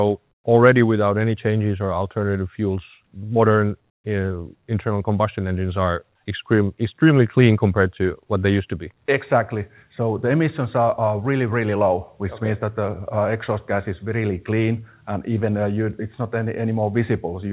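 At 0.32–0.44 s and 3.90–4.04 s, comfort noise replaces the background with steady, featureless hiss about 15 and 18 dB quieter, likely from discontinuous transmission filling pauses.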